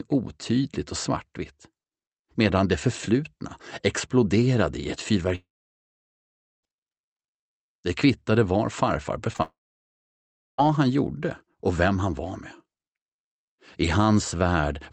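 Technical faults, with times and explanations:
5.35 to 6.65 s, long network dropout: The incoming stream was most likely interrupted for about 1.3 s, and that stretch of audio never arrived. The receiver first extended the last sound as a brief fading buzz or hiss lasting roughly a tenth of a second. About 1.2 s of silence follows before the sound resumes. The missing portion is skipped, so playback picks up further along rather than where it left off.
9.33 to 9.36 s and 9.36 to 9.40 s, short concealed packet loss: Two consecutive 20 ms chunks reached the decoder too late to use. Each time, the receiver patched the hole by continuing the preceding sound, pitched or noise-like as fitted, and then blended back into the real signal. The two back-to-back patches make a short smear or wobble, and any brief transient in that spot can disappear. These patches lead directly into the next dropout.
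9.42 to 10.6 s, long network dropout: The stream most likely cut out again, losing about 1.16 s of audio. A short concealment tail extends the last sound as a fading buzz, then about 1.05 s of silence follows. The sound returns past the gap with that stretch permanently missing. The restored audio carries the Opus call codec's 8 kHz bandwidth limit.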